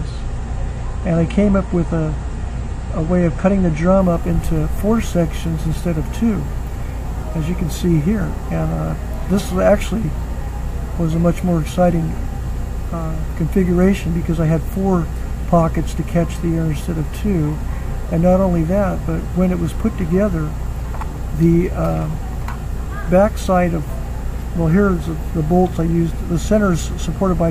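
For the first 4.0 s the sound is dull, with nothing above 9.6 kHz and heavier codec artefacts, then brightens abruptly without a gap. This is an adaptive stream starting at a low bitrate, which fits AAC at 32 kbit/s stepping up to 96 kbit/s.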